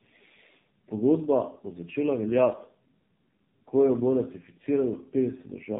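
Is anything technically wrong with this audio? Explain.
Yes. Tandem speech coding affects the speech throughout. It sounds like two low-rate narrowband speech coders in a row, most likely around AMR-NB at 7.4 kbit/s, bridged by a plain G.711-style telephone link. Each coder rebuilds the previous one's already damaged output. Nothing reaches above 3.7 kHz. Unlike a single narrowband codec, which only sounds band-limited and slightly buzzy, this speech adds compounded roughness, a duller muffled tone and a watery warble.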